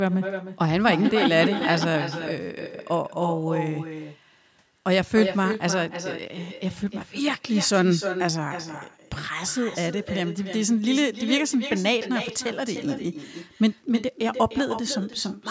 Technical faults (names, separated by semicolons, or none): echo with no canceller